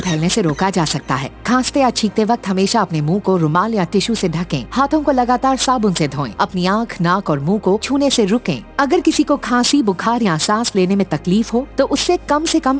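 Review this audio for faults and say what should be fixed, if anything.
Aliasing runs throughout the clip. Content above 8 kHz has folded back below that edge into gritty, metallic tones unrelated to the original pitches, only moderately below the main sound. This suggests a drop from 44.1 kHz to 16 kHz without filtering. To prevent it, low-pass below 8 kHz before downsampling, or use a proper resampler.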